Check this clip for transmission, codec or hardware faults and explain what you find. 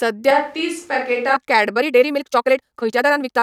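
Two faults are audible in this speech clip.

From 0.31 to 1.36 s the sound turns abruptly roomy and hollow, with thinner bass, a drop of about 5 dB and room noise roughly 35 dB below the speech. This is likely a switch to a distant microphone, with the close microphone's signal missing.

From 1.73 s to the end the pace jumps to 1.83 times normal while the pitch stays the same, giving a rushed delivery. This time-stretched section likely comes from software dropping short pieces of audio to shorten it.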